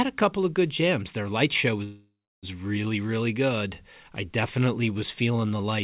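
Packets were most likely held up in transit between 1.84 and 2.45 s, right after "light show", so the jitter buffer ran dry. This is a call audio freeze. The receiver stretches the last sound into a fading buzz that dies to silence for roughly 0.3 s. Speech then resumes intact at "really really good I", with nothing lost but about 0.59 s of extra delay inserted. Throughout, the band stops at 4 kHz, which fits a narrowband G.711 call.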